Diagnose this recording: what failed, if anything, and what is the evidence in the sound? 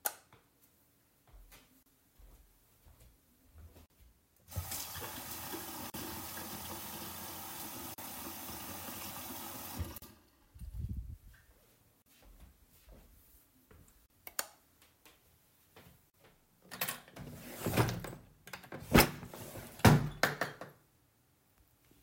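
This one failed at the codec stage, as a gap at a join of encoded pieces. Short dropouts hit at 1.83, 3.86, 5.9, 7.94, 9.98, 12.02, 14.06 and 16.1 s, about 2 s apart, each 40 ms (the first 32 ms). The edges are smeared, and the sound picks up exactly where it left off. That points to separately encoded pieces joined untrimmed, with the encoder's start delay and last-frame padding left in at each join.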